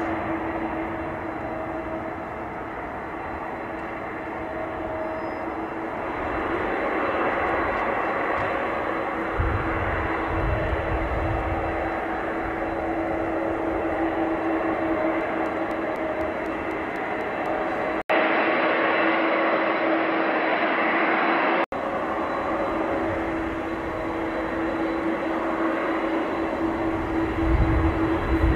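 From 15.21 to 17.46 s there are periodic USB or driver dropouts: every 0.25 s a tiny slice of audio, around a millisecond, is lost and replaced by silence, giving roughly ten evenly spaced ticks. The strict regular spacing, and the fact that the ticks sound only while there is signal, set this apart from random clicks caused by packet loss or a bad cable, which fall at irregular moments.

At 18.02 s an 80 ms gap of silence is followed by audio that sounds duller and boxier, with nothing above 5.5 kHz. The level shifts by about 5 dB and a new background noise sits about 35 dB below the signal. This continues until 21.72 s. The likely cause is an input switched to a poorer device. A simple low-pass filter would not bring a silent gap, a level jump or a different noise floor all at the same moment.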